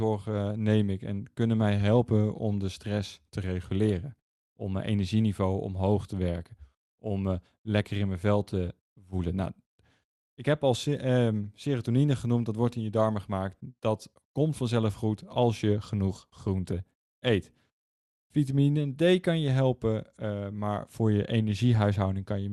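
There are no technical faults to describe at any point in this speech, which was carried over a WebRTC call path using Opus.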